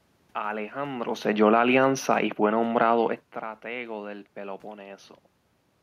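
From 1.28 s to 3.17 s the speech sinks steadily by about 4 dB, and the room noise behind it sinks by the same amount. That shared drop is what marks it as automatic gain falling. The automatic gain control judged the input too loud, or its background noise too strong, and pulled its gain down over nearly two seconds. By contrast, the talker's own shifts toward and away from the microphone, around one and three seconds, change only the voice, not the background.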